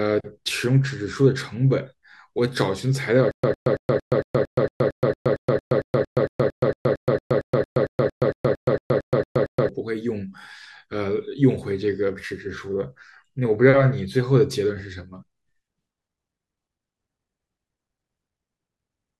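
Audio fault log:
3.31–9.69 s, stutter with silent gaps: a short fragment of about 106 ms of the speech repeats 28 times, each repeat followed by roughly 122 ms of dead digital silence, giving an even cycle of about 228 ms. The likely cause is a playback or stream stall in which every retry replayed the last buffered fragment and then ran dry, so the speech that belonged in this span is missing.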